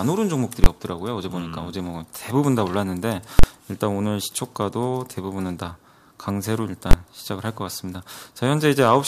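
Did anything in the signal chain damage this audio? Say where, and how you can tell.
Yes. Three hard, very loud bangs cut through the audio at 0.64–0.66 s, 3.39–3.44 s and 6.91–6.93 s. The middle one lasts about 43 ms, against about 21 ms for the others. This is invalid numbers at full scale in the processing stage. A calculation went infinite or invalid, and each affected block was pinned to the output's extreme value. The lengths fit blocks of 1024 and 2048 samples.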